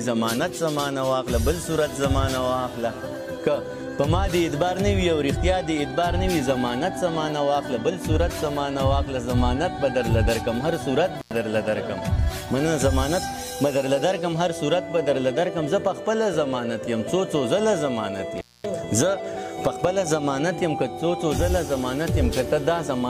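Intermittent contact at 11.20 s and 18.38 s: a loose connection opens for about 95 ms, then 230 ms, leaving crackle-edged dropouts, seen as near-flat waveform gaps with vertical spectrogram clicks.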